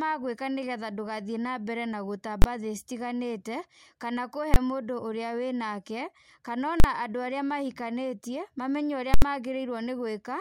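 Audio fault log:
2.42–2.44 s, 4.54–4.56 s, 6.80–6.84 s, 9.14–9.22 s: invalid numbers at full scale. A processing calculation yielded infinite or invalid values that were pinned to maximum amplitude, holding the output flat at one extreme value, far from zero and beyond the speech peaks, for blocks of 20, 20, 40 and 80 ms. Each block is heard as a very loud pop at entry and exit with the speech missing between them, or as a single loud bang when the block is short.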